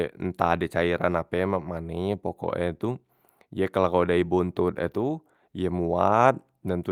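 No technical faults can be heard in this speech recording. There is nothing to point to at any moment in it.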